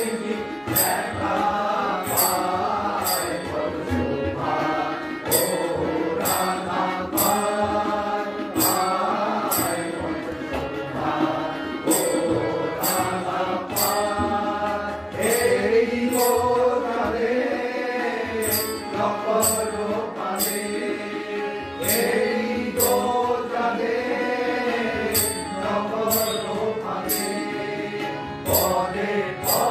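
From 9.75 to 10.89 s there are CD scratch ticks. Five short clicks fall at an even rate, about four per second. Each lasts no more than a millisecond or two. A blemish on the disc passes the laser once per turn, destroying more data than error correction can repair, so the player patches or mutes those samples.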